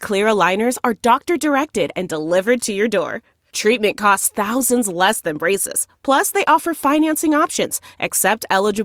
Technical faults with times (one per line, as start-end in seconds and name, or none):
4.46 corrupt FLAC frame